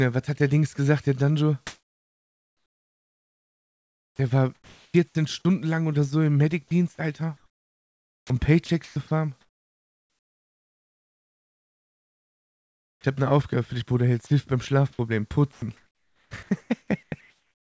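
Sound carried over a call path whose spectrum stops at 8 kHz, which fits a wideband codec such as G.722 at 64 kbps, is chopped by the voice detector from 1.67 to 4.94 s and from 7.37 to 13.04 s. This is likely caused by the sender's detector repeatedly toggling transmission, swapping about 2.9 s and 4.7 s of the sound for comfort noise, which shows as a waveform broken into alternating real and flat synthetic segments. Sound is dropped by the voice detector at 14.27–14.30 s for 30 ms and at 15.53–15.62 s for 90 ms, likely because the detector mistook it for background. On a spectrogram these appear as short notches where detail gives way to uniform noise. From 15.53 s to the end, comfort noise takes the place of the background, likely from discontinuous transmission during the pause, so the spectrogram shows smooth, featureless noise lacking the texture of the real background.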